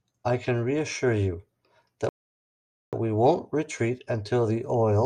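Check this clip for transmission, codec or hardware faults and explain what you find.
There's one transmission fault in the speech: a rebuffering stall from 2.09 to 2.93 s. Playback ran dry, went silent, then picked up exactly where it stopped, adding about 0.84 s without losing anything.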